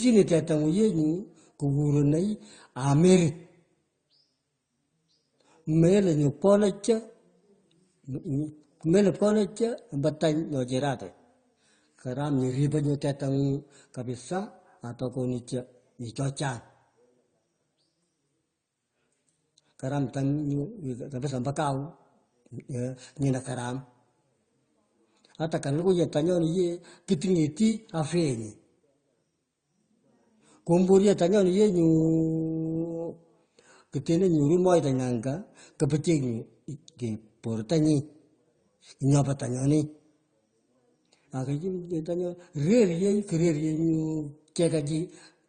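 Throughout the speech, nothing reaches above 9.2 kHz, which shows as a flat ceiling on a spectrogram. The artefacts of the two codecs are heard together. The likely cause is transcoding between lossy codecs, consistent with low-bitrate AAC-LC followed by Opus.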